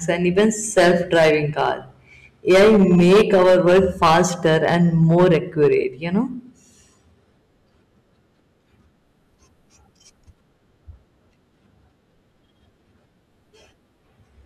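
Right from 0.10 s to 1.70 s the speech hits hard clipping, pushed about 10 dB past what a stage in the chain could pass, so the peaks get sliced flat. Then it happens again from 2.50 s to 5.74 s, this time about 13 dB over. Those squared-off tops throw extra harmonics way up high, so every louder syllable picks up a harsh, fuzzy crackle, and it's noticeably rougher in that second stretch.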